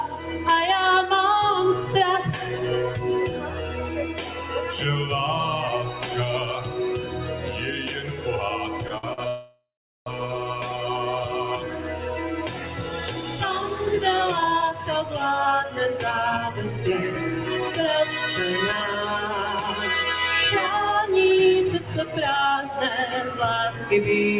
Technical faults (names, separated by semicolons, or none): noise suppressor applied to music or sounds; sound cut by the noise suppressor; short stall from a late packet; call audio freeze; jitter buffer speed-up